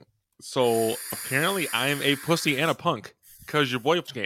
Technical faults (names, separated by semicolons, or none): damaged data in a compressed stream